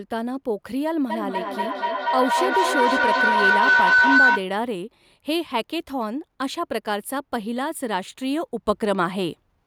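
From 1.1 to 4.55 s there is a feedback howl. Two devices share the room and the call, so each trip through the loop adds level. The tone settles near 1.5 kHz, the loop repeats about every 200 ms, and it peaks about 7 dB above the speech.

At 8.66 s the level steps up by about 4 dB and stays there until the end. Speech and background noise rise together, with no fade. The likely cause is a digital gain change applied in a single sample without a ramp: a sudden gain jump.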